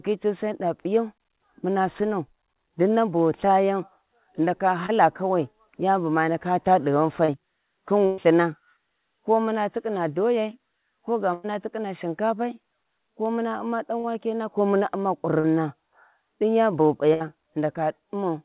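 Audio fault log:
4.86 s, 7.25 s, 14.00 s and 15.40 s: short concealed packet loss. Between 20 and 40 ms of speech failed to arrive in time, the third one just before "ko muna". The receiver extended the preceding sound and blended back in, so each gap is only a brief smear or wobble. Unlike a burst, it is too short to become a held buzz or fade away.
8.06 s, 11.34 s and 17.14 s: burst of packet loss. About 120, 100 and 60 ms were lost in a row. The concealment stretched the last sound into a buzz or hiss that fades as the gap goes on, and the speech then resumes further along with that stretch missing. The 4 kHz ceiling of this narrowband call fits 64 kbps G.711.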